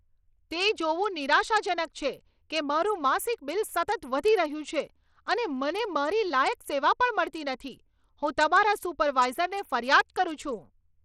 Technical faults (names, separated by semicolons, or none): Bluetooth SBC compression